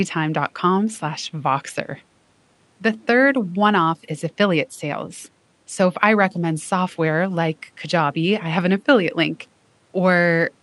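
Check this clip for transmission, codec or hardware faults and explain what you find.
No transmission, codec or hardware faults.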